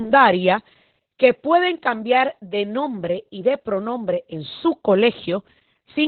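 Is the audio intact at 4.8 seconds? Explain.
No. Throughout the clip, including 4.8 seconds, Opus voice compression runs in narrowband SILK mode, which fits a rate near 8 kbps, coding the excitation coarsely. Nothing survives above 4.3 kHz, so the speech at that point sounds muffled, hoarse and slightly robotic.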